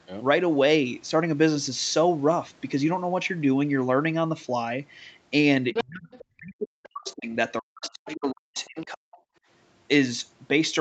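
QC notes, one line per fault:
5.73–6.25, 6.84–7.14, 8.09–8.15, 8.56–8.67 s: other side's voice leaking through. A second voice appears in four scraps under the main talker. The first is strong, nearly as loud as the speech itself. The later three are faint, well below the speech. The likely cause is a loudspeaker on the talker's end whose playback reached the microphone. The echo canceller did not fully subtract it, so fragments of the far end remain.
5.81–9.11 s: speech suppressed in double talk. For about three seconds the main voice keeps sinking and breaking up, dropping by as much as about 40 dB at its deepest. This stretch overlaps the leaked far-end voice. That points to the likely cause: the echo canceller heard both sides at once, could not tell its own talker from the echo, and pulled everything down.
9.39–9.45 s: background gated by the echo canceller. The room tone briefly falls away, dipping by about 24 dB, then returns. 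The drop is short, a momentary hole rather than a pause. It comes from the canceller clamping the microphone hard while the loudspeaker was active, then releasing.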